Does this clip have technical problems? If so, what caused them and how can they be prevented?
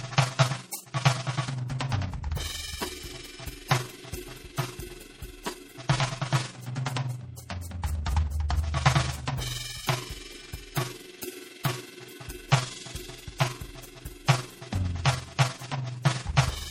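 Yes. Throughout the music, the level pulses around 20 times a second by about 6 dB. This is overlap-add ripple: frames were rejoined with an overlap whose windows don't sum to constant gain. It differs from MP3 damage because it is a regular level flutter, not a change in tone. Use a window and overlap pair that sums to a flat gain.

The whole clip also sounds plainly watery and swirly, with content stopping near 19.9 kHz. The likely cause is MP3 compression at a low bitrate, around 48 kbps, which removes weak frequency lines that then switch on and off from frame to frame. Unlike the ripple, this smears the texture rather than the loudness. Encode at a higher bitrate or use a lossless format.

At 8.49 s, a hiss spreads about 16 ms ahead of an attack. This is pre-echo: the codec spread quantisation noise sized for the loud attack across its whole block, filling the quiet moment before it. 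It is distinct from an echo because the noise comes before the attack, not after it. Use an encoder with short-block switching, or a higher bitrate.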